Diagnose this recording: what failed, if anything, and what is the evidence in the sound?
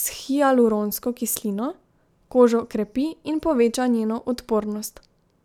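Nothing in this speech recording points to a failure at any stage, so there's no fault to diagnose here.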